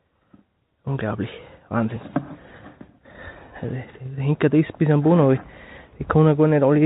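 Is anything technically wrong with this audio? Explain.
No, nothing here is actually wrong: the sound simply has the narrow, phone-like character of an ordinary call connection, with nothing above about 4 kHz, which fits a G.711 mu-law codec running at 64 kbps doing its normal job.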